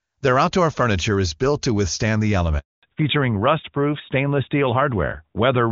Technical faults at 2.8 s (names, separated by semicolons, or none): handover gap; fallback to narrowband